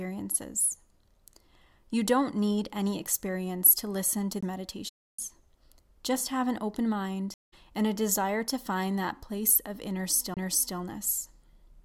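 At 4.41 to 4.43 s, a CD skip. The laser jumps to another turn of the disc's spiral. There is a tick and a very brief mute, then the speech resumes from a different point in the recording.

From 4.88 to 5.19 s, AAC frame loss with muting leaves a hole of about 0.3 s. The decoder zeroes the missing frames' spectrum. The overlapping windows fade the speech out and back in, so the hole's edges sound soft.

From 7.34 to 7.54 s, a second AAC frame-loss mute follows, about 0.19 s long. It has the same soft fade out and in.

At 10.34 to 10.37 s, another CD skip occurs. A tick and a brief mute of about 30 ms come first. The speech then jumps to a new position on the disc.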